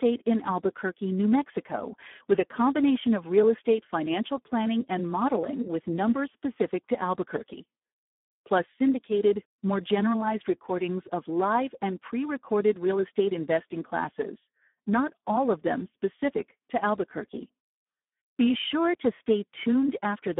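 Throughout the speech, a Speex codec running at a low setting, consistent with about 8 kbps, starves the excitation of bits, leaving the sound hoarse, noisy and edging toward robotic, confined to a narrow 150 Hz to 3.6 kHz band with nothing above 3.8 kHz.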